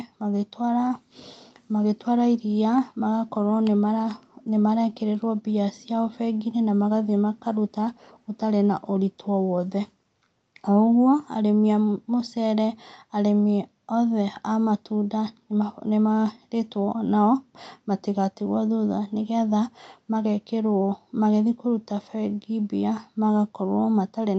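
No technical faults can be heard in this speech recording; it has the steady band-limited sound of a call connection, with nothing above about 8 kHz, which fits a wideband call codec and the normal high-pass and processing of a call microphone.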